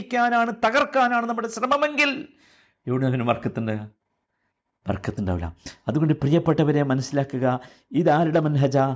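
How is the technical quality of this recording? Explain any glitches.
No glitches can be heard anywhere in this speech recording. There is nothing to explain, since the audio carries on without any break, jump or disturbance.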